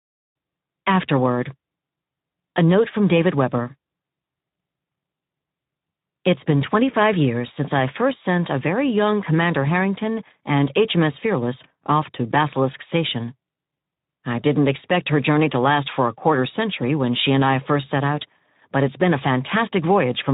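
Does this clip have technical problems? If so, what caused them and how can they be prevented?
Yes. Throughout the clip, the speech has passed through the Speex codec at a low quality setting, which fits a rate of about 11 kbps. Speex is a CELP coder that models the voice with a predictive filter plus an excitation signal. At this setting, too few bits go to that excitation, so the fine structure of the speech isn't carried accurately. The result is plainly audible: the speech sounds noisy and hoarse from start to finish. To prevent it, run Speex at a higher quality setting or use a modern codec such as Opus at a more generous bitrate.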